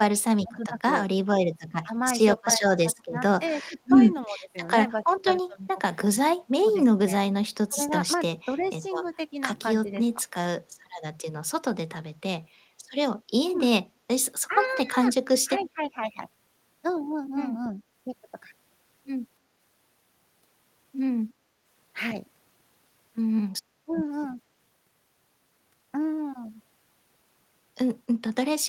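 Speech that dips by up to about 25 dB in pieces between 0.0 and 10.24 s, again between 14.47 and 15.97 s, and at 23.85–23.92 s, likely speech suppressed in double talk; these are level drops, not added sound. Faint delayed copies at 0.63–0.67, 8.61–9.09, 15.63–15.70 and 17.64–17.69 s, about 15 to 30 dB down and trailing by 297 ms, are likely echo leak, an added repeat rather than a loss.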